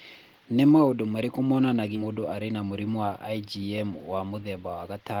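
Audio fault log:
1.95 to 2.06 s, skip ahead: right after "maũndũ marĩkũ" the speech jumps forward and lands on later audio with essentially no pause, so something like 400 ms of talk is simply gone. That fits a jitter buffer that overflowed and threw away a chunk while newer audio was already queued, which cuts the delay by roughly the same amount. The two sides are spliced almost directly, so it comes across as a sudden lurch.
2.54 to 2.98 s, jitter buffer speed-up: for just under half a second the speech runs about 11% fast while the pitch stays put, so it sounds briefly hurried rather than chipmunky. The receiver was holding more audio than it wanted and trimmed tiny pieces, one or a few pitch periods each, over and over, shaving off around 50 ms in total to pull the delay back toward its target.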